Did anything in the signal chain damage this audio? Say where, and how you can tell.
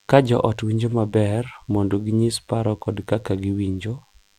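Yes: a DECT cordless phone buzz entered the analogue wiring, where a nearby handset or base station's 100 Hz radio bursts were rectified by the audio circuit. A thin, steady 100 Hz buzz rich in harmonics runs throughout the speech, roughly 40 dB below it.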